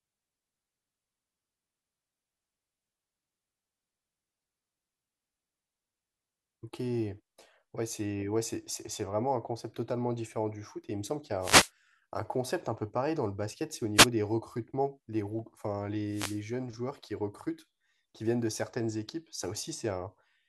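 Wireless microphone noise hits at 11.40 to 11.71 s, 13.95 to 14.08 s and 16.07 to 16.43 s: the FM radio link fades as reflected paths cancel, so receiver noise surges over the speech as a brief swish of static each time.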